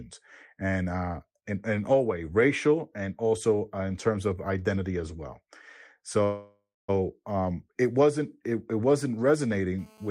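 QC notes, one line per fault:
6.23–6.90 s, call audio freeze: just before "um it wasn't it" the sound stalls for about 0.65 s. It carries on as a decaying continuation of the last sound, thinning to silence for the final 0.22 s, then resumes exactly where it left off. Nothing is lost; the gap is inserted, so everything after arrives about 650 ms later. This pattern likely comes from delayed packets draining the jitter buffer, with the receiver stretching the last audio until delivery resumed.
9.79–10.10 s, GSM phone buzz: after "wasn't it it wasn't" a hard, raspy buzz appears at 217 Hz, rich in harmonics and unrelated to the speech, sitting about 30 dB below the signal and running steadily to the end of the clip. The steady character fits a nearby 2G handset in an active call, its transmit bursts rectified by the audio circuitry into a repeating pulse train at the burst rate.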